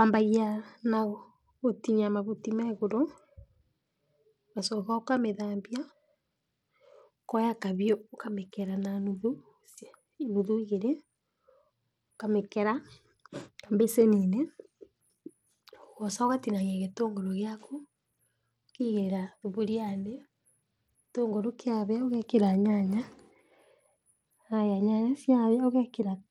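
Bluetooth SBC compression, likely the cause of the plainly audible damage, runs throughout the speech. The sub-band codec splits the signal into a few wide bands and hands out bits with no model of hearing. At this setting the upper bands get starved. The treble thins and flickers in and out, and a gritty, grainy noise with aliased edges clings to the voice, consistent with a low bitrate around 96 kbps.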